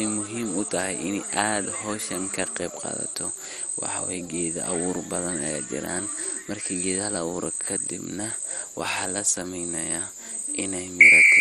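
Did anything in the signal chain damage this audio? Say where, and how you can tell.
Yes, at the codec stage, throughout the speech. Nothing survives above 14.3 kHz, and the remaining top end flickers with a gurgling, granular texture. That points to MP2 compression, likely at a rate around 56 kbps, starving the upper sub-bands of bits and switching them off.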